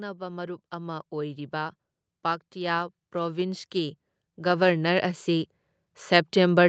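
The automatic gain control judged the input too quiet and raised its gain in two slow ramps: by about 6 dB from 0.17 to 1.82 s, then by about 11 dB from 2.52 to 5.56 s. Because the whole signal is amplified, the speech and the background noise swell together, and the level climbs audibly rather than jumping. This automatic gain rising sits on top of call microphone processing, which limits the audio to nothing above 8 kHz.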